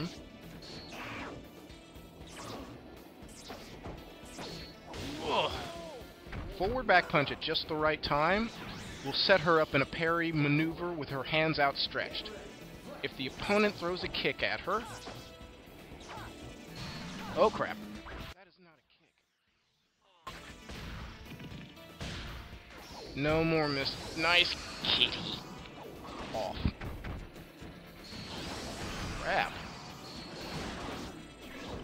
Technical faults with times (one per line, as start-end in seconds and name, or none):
18.33-20.27 one channel inverted